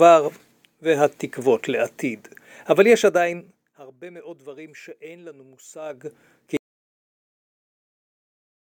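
From 2.99 to 3.93 s, zipper noise: the level drops about 25 dB in coarse 2 dB steps, roughly fifteen a second, so a ticking rides the fade, unlike a smooth ramp. The rise from 5.80 to 6.27 s zips faster, around thirty steps a second. At 6.57 s an audio dropout to silence cuts the sound to silence with no room tone through the end, likely from lost input.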